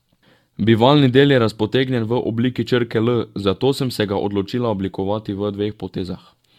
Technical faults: generation loss

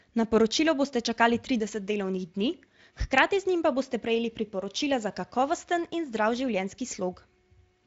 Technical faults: none

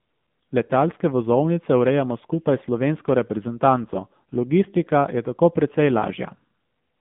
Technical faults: AMR narrowband mobile codec

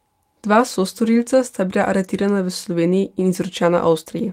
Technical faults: none

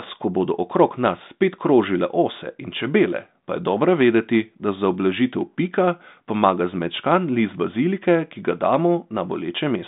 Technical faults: none

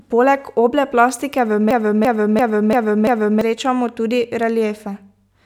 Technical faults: system hang loop

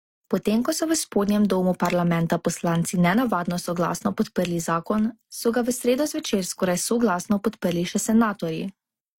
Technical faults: transcoding between lossy codecs

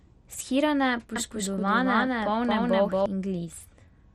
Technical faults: MP2 compression; doubled audio track

